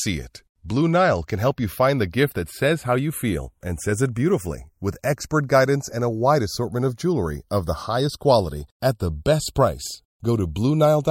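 Speech with channels drifting apart throughout. The two sides run on separate clocks, off by around 30 ppm. Their offset slides to a fraction of a millisecond by the end. In mono the comb notches sweep slowly, heard as slow flanging.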